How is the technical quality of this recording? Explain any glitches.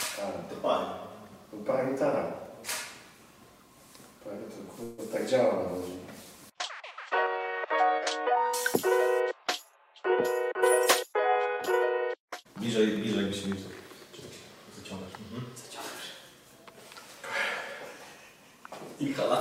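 The recording has two transport glitches. From 4.83 to 5.00 s there is a call audio freeze: the sound stalls into a fading buzz or hiss for 146 ms, likely because late packets emptied the jitter buffer, then resumes with nothing lost. From 10.17 to 13.48 s a jitter buffer speed-up plays the audio about 3% fast at unchanged pitch, trimming roughly a tenth of a second of pitch periods to catch up on the added delay.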